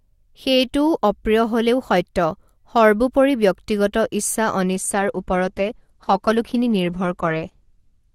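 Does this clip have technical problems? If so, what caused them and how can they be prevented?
Yes. From 4.74 s to the end at 8.15 s, the speech switches abruptly to an adaptive stream at a lower bitrate. The treble thins and codec artefacts rise, with no gap at the switch. This points to the player dropping from roughly 64 kbit/s to 16 kbit/s Opus when throughput fell. A spectrogram shows energy above 12.2 kHz vanishing at 4.74 s, while the waveform stays continuous. A larger playback buffer or a higher minimum bitrate floor would prevent it.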